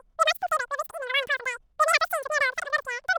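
From start to end, the speech suffers a wrong sample rate fault: audio recorded at 16 kHz is played at 48 kHz, running three times fast and about 19 semitones high, chipmunk-like and rushed. A spectrogram shows every harmonic and formant stretched threefold upward, the waveform compressed in time.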